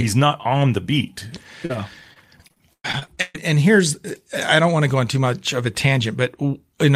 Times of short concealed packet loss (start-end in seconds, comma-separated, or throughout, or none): 1.65-1.71